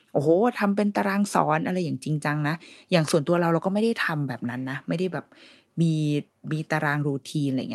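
The speech signal is technically sound throughout, carrying only the ordinary character of a call codec whose audible band tops out around 12 kHz.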